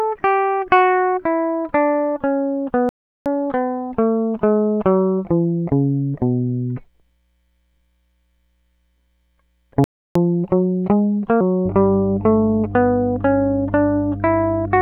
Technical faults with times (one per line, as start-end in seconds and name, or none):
2.89-3.26 playback stall
3.26-5.71 catch-up at higher speed
9.84-10.15 playback stall
10.15-11.41 catch-up at higher speed
11.65-14.82 mains hum